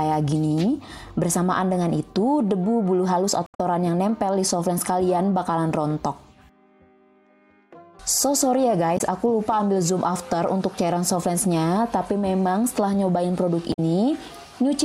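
Damaged data in a compressed stream at 3.44–3.60 s, 8.94–9.01 s and 13.70–13.79 s: corrupted frames make the decoder lose sync, giving brief glitches.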